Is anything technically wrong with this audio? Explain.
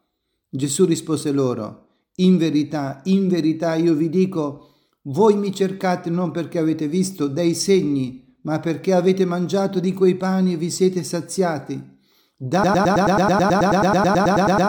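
Yes. From 12.64 s to the end, one 108 ms fragment repeats exactly, 19 times in a row, in a broken-record loop. The likely cause is a stalled player or stream resending its last buffer, so the audio that should follow is lost.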